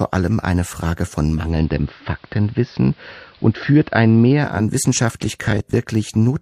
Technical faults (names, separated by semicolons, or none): digital radio blending to analogue; robotic sound from repeated short buffers